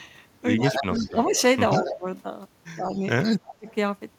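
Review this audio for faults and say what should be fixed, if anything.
There's an echo leak running through this speech: a delayed copy of the voice trails the original by 132 ms, from 0.57 to 1.41 s, 1.85 to 1.95 s, 2.86 to 3.29 s and 3.67 to 3.75 s. It starts loud, only about 5 dB under the direct speech, then fades to roughly 10, 15 and finally 25 dB down. That's likely a far-end loudspeaker feeding its microphone with an echo canceller that isn't fully converged, so the leftover gets sent back. A better-tuned canceller, or a headset on that end, would stop it.

You'll also hear speech suppressed in double talk. The voice dips by about 10 dB across 0.66 to 1.34 s and 1.73 to 2.06 s, and drops much harder, around 30 dB, from 2.78 to 3.67 s, losing close to half a second of level there. These stretches line up with the echo, so it's likely the canceller couldn't separate the local talker from the returning echo and pulled both down together. 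Better double-talk detection in the canceller, with less aggressive suppression, would keep the voice intact.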